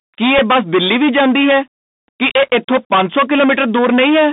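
From the start the speech is hard clipped. The level is driven about 21 dB past what the stage can pass, so close to a third of the waveform is sheared off flat at the ceiling. Those squared tops generate dense upper harmonics, and the result is a harsh fuzz riding on every loud syllable rather than occasional crackle on isolated peaks. The distortion is constant through the clip.

The whole clip also carries the sound of the Bluetooth CVSD headset codec, at 64 kbps. Content sits inside a narrow telephone band of roughly 150 Hz to 3.7 kHz, with nothing audible above 4 kHz. The damage is plainly audible. The one-bit delta modulator's adaptive step cannot keep pace with fast, loud high-frequency movement, so sibilants come out scratchy and a granular hiss lies beneath the speech. The clipped input makes those steep transients more frequent.

At about 0.38 s there is a Bluetooth headset packet repeated event lasting about 7.5 ms, which fits two lost packets. 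The chip replays the previous packet's data instead of fresh audio. The two repeats at the 3.75 ms packet spacing give a brief glitch in the speech before normal packets resume.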